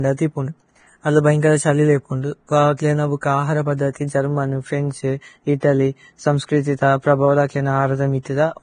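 Throughout the clip, heavy low-bitrate coding, likely Vorbis compression at around 23 kbps, discards everything above 9.7 kHz and quantises the remaining treble coarsely, so fine detail turns into noise. The speech sounds dull, hissy and grainy, with roughened tones and softened consonant attacks.

At 5.60 s, just after "ജര്മനു ഫ്രേന്ഛ്", a sharp attack falls late in a transform block, and the codec spreads its quantisation noise back across the quiet gap before it. The result is pre-echo: a brief hiss of about 24 ms precedes the onset, which sounds smeared.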